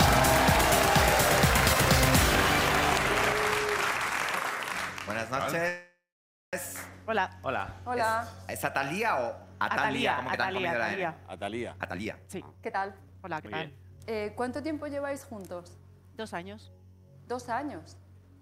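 At 5.68 s the sound stops moving and turns into a fading buzz, then near silence for about 540 ms. It resumes at 6.56 s where it left off. This call audio freeze likely came from delayed packets emptying the jitter buffer. About 844 ms was inserted.

From 11.73 to 14.56 s a jitter buffer speed-up runs. The receiver trims many tiny pitch-period slices to shed excess delay. Playback runs at 129 percent with unchanged pitch, sounding rushed. Roughly 0.7 s is removed.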